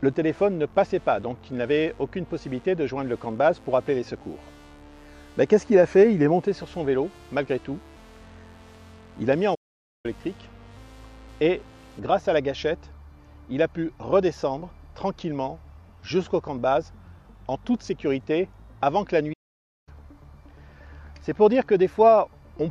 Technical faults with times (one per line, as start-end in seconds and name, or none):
9.54-10.06 playback stall
19.33-19.89 playback stall